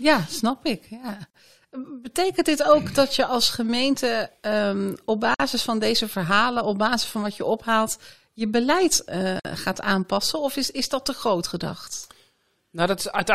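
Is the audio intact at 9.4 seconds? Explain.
No. Between 9.40 and 9.45 s, right after "je ophaalt je beleid" and before "gaat aanpassen", there is a gap at a join of encoded pieces: a gap of about 53 ms cut into the speech. This comes from separately encoded pieces, roughly 4 s each, joined untrimmed, so one piece's padded final frame and the next one's encoder delay both remain. On a waveform it shows as a notch with smeared edges; a spectrogram shows a dark vertical band across all frequencies with blurred borders.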